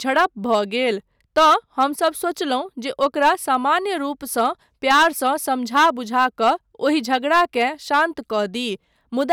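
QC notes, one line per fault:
0.09–0.56, 1.38–2.08, 3.03–3.77, 4.39–4.46, 4.90–5.28, 5.76–6.50, 6.87–8.03, 9.31–9.33 s: hard clipping. The speech is driven about 2 to 9 dB past full scale, worst at 4.90 s, so peaks are sliced flat and give crackling fuzz. The waveform shows squared-off tops; the spectrogram shows broadband harmonic smear up high.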